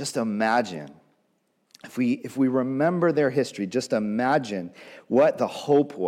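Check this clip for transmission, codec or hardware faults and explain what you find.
No faults can be heard anywhere in this speech.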